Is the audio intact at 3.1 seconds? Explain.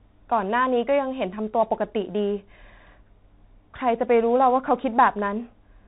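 No. The Bluetooth CVSD headset codec covers the whole clip, 3.1 s included: one-bit adaptive steps track the waveform, nothing above 3.9 kHz passes, and the codec damage is plainly audible, with a granular hiss under the speech.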